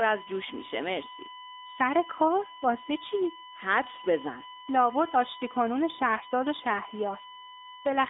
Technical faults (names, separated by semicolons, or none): USB whine; AMR narrowband mobile codec